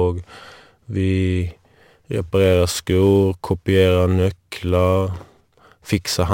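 Sample clock jitter affects this speech clip from 1.42 s to the end: the converter's timing wanders by several microseconds, so each sample lands slightly off time, adding a hiss-like roughness around 25 dB below the speech that thickens on loud, bright sounds and disappears in pauses.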